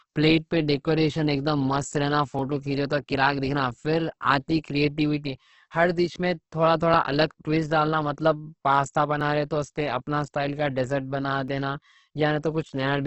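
From the start and through the whole clip, the speech has the heavy damage of Opus compression, likely in its CELT music mode at a low rate around 12 kbps. There is nothing above about 8.2 kHz, so the top end is dull and wideband at best. The encoder keeps each band's energy but has too few bits for detail, so it fills bands with folded or noise-like content. Voiced sounds come out grainy, rough and hissy rather than hollow or swirly.

From 0.11 s to about 11.5 s there are clock drift buffer slips: short clicks that recur every 2.27 s, roughly seven in all. The steady spacing points to two devices whose sample clocks disagree, by something on the order of 500 ppm. The buffer between them creeps until it must drop or repeat a small block, likely a few tens of samples, and that discontinuity is the click.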